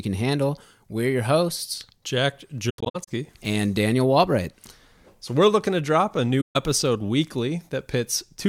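Speech with AAC frame loss with muting in two places: from 2.69 to 3.08 s, about 235 ms of sound drops out in scattered gaps, the longest around a tenth of a second, and from 6.41 to 6.56 s, right after "looking to drop a", a gap of about 149 ms. The decoder zeroes the missing frames, and the overlapping windows fade each hole in and out smoothly. That soft edge distinguishes it from a hard digital dropout.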